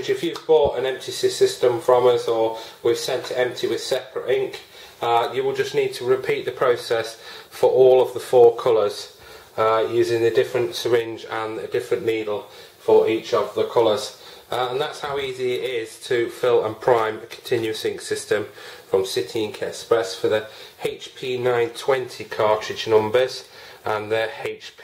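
Three sharp, isolated clicks show up, at 14.77 s, 20.61 s and 23.19 s, each one a thin vertical line straight up the spectrogram. They're likely dropped samples: a tiny run of samples, well under a millisecond's worth, goes missing, so the waveform jumps abruptly from one value to a later one. The gap is far too short to take any sound away, so all you hear is that single tick where the jump happens.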